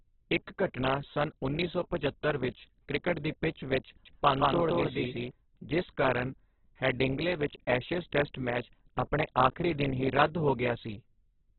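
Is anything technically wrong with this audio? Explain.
Yes, two faults are audible.

Throughout the clip the speech sounds heavily damaged: muffled, with nothing above about 4.4 kHz, and grainy and rough, as though noise has been woven into the vowels and consonants. This is likely Opus compression at a very low rate, something like 8 kbps, in its narrowband music mode. Short of bits, the encoder keeps each band's energy but fills the detail with folded or noise-like content, which causes the roughness.

From 4.05 to 5.31 s, just after "ਕ੍ਰਿਕਟ ਦੀ ਪਿੱਚ ਵਿੱਚ", the speech is heard twice. A second copy runs roughly a fifth of a second behind, at about the same loudness. It switches on and off abruptly and carries no reverberant tail. This is likely a doubled audio track, where the same signal was mixed in again through a slower path or a misaligned edit.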